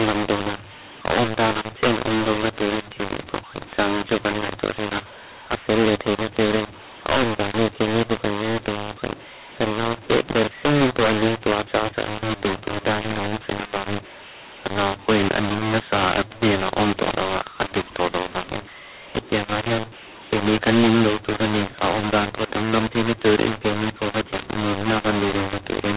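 From the first second to the last, the speech carries a mu-law and A-law mix-up. The telephone audio was encoded with A-law but decoded as mu-law. The two laws map their 8-bit codes to levels differently, so every sample comes back at the wrong size. Some are too loud, others too quiet. The quietest codes land well above silence. The result is a harsh, gritty distortion on the speech. Pauses fill with hiss. The narrow telephone band, with nothing above 4 kHz, is still audible.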